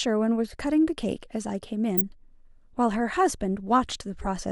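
Corrupt frames decoded at 1.97–2.00 s and 4.21–4.26 s: flipped bits made the decoder misplace energy, giving a loud glitch near -10 dBFS, then a quieter, roughly two-frame glitch.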